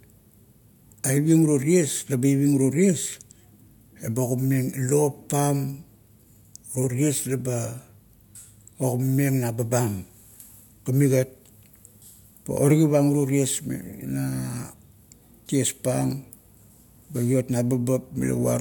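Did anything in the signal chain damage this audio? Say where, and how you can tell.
No, nothing in the signal chain has audibly damaged this speech recording. Close listening turns up no sign of trouble at any stage between capture and playback.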